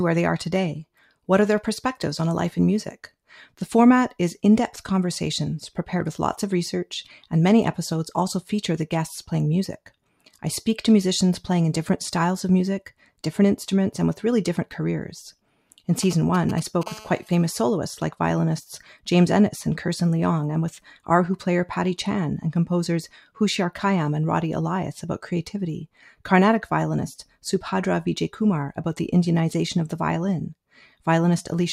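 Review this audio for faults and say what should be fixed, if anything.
Sound cut by the noise suppressor occurs twice: from 0.97 to 1.12 s, with a drop of about 9 dB at its deepest, and from 25.93 to 26.22 s, with a drop of about 12 dB. In both places the suppressor misread wanted sound as background noise and applied extra gain reduction, so the level sags briefly below its surroundings. To prevent this, lower the suppressor's reduction depth or slow its release so that sustained and decaying sound is not treated as noise.

GSM signalling bursts run from 16.03 to 16.83 s, roughly 15 dB below the programme level. A nearby 2G handset was exchanging short control transmissions with the network, the kind sent while setting up a call. Its pulsed radio energy was rectified by the audio circuitry and came through as an irregular, galloping ticking with short bursts of 217 Hz buzz. To prevent this, keep phones away from the microphone, cables and preamp, and use shielded, balanced connections.

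GSM phone buzz follows directly, from 16.86 to 17.70 s, about 23 dB below the signal. The handset is now in a call and transmits a steady stream of bursts at 217 per second. The audio path demodulates these bursts into a continuous, harsh 217 Hz buzz with many harmonics that has no relation to the wanted sound. To prevent this, switch phones to airplane mode or move them well away from the recording chain.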